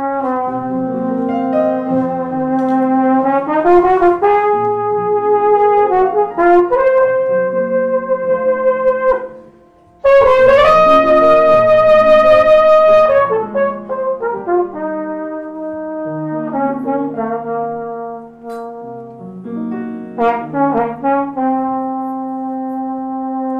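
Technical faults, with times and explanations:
Nothing stood out on listening.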